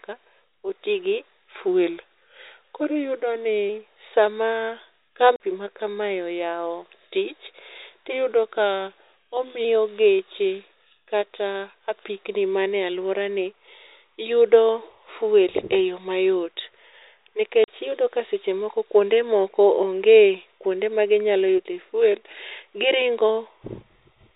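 Right after "oti gi", from 1.68 to 3.69 s, the speech suddenly slows by about 6.4% and drops roughly 115 cents, a bit more than a semitone, then snaps back up to normal. That's likely a drift correction step, where clock-matching software shifts the playback rate in one jump to rebalance its buffer. Speed and pitch move together, so the speech sounds briefly detuned and sluggish. The same thing happens from 8.12 to 9.65 s, ending just before "geche kata apikni manie", with the same slowdown and pitch drop.

Between those, at 5.36 to 5.40 s, there's a 40 ms hole of dead silence with hard edges. That's packet loss filled with silence: the receiver got nothing and played silence, and the gap length fits two 20 ms packets. It happens again from 17.64 to 17.68 s, just before "iyudo ka seche moko". Both dropouts play over the narrow, telephone-band sound of the G.711 line.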